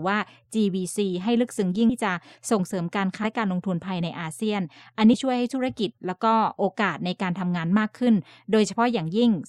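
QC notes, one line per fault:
1.89–1.92 s, 3.23–3.27 s, 5.13 s, compressed frames skipped: the audio lurches forward, dropping about half a second at the first jump and roughly 150 ms at each later one. Whole frames of the encoded stream were missing or rejected as damaged, consistent with 20 ms frames.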